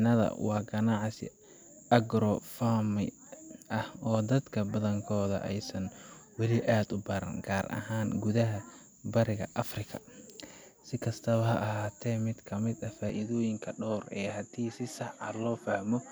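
At 13.09 s the speech changes character and stays that way to the end. The top of the spectrum vanishes, with nothing above 12 kHz, so the sound turns slightly duller. There is no gap at the change, and the level stays roughly the same. A faint new background hiss appears, far below the speech. The likely cause is an input switched to a poorer device, such as another microphone with a narrower band and its own noise.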